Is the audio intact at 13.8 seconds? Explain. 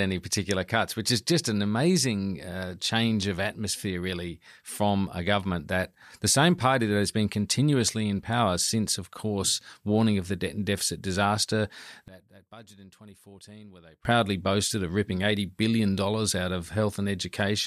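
No. At 13.8 seconds the speech has collapsed to a faint remnant, roughly 23 dB quieter. This runs from 12.08 to 14.05 s, between "debt and deficit disaster" and "boasted of ripping". The likely cause is one channel inverted: one stereo side has flipped polarity, so the centred voice cancels when the channels are summed to mono, leaving only their small differences.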